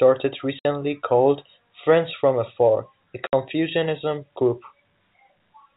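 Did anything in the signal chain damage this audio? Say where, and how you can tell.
Yes. Packet loss filled with silence hits the speech at 0.59 to 0.65 s and again at 3.27 to 3.33 s. Each is a 60 ms dead gap with abrupt edges, which fits several consecutive network packets going missing and the receiver substituting silence for them.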